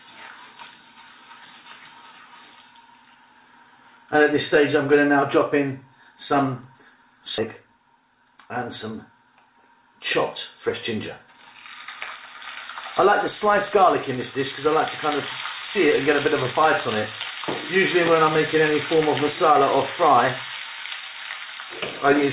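At 7.38 to 7.40 s the audio does a skip ahead: about 0.7 s of material never plays, and the sound on either side is butted together with no silence in between. The receiver had a backlog queued and discarded that stretch, likely because the jitter buffer overflowed, so playback lurches forward. Unlike a dropout, there is no hole or fill sound, just an abrupt splice where the continuity breaks.

From 7.60 to 9.75 s a jitter buffer speed-up follows, with playback running at about 109 % of normal speed. Having too much audio queued, the receiver repeatedly cut out short pitch-period-sized slices, removing roughly a fifth of a second in total to bring the delay back down. The passage sounds rushed but keeps its original pitch, which separates it from a sample-rate error, where speed and pitch rise together. The narrow G.711 mu-law band, with nothing above 4 kHz, runs throughout.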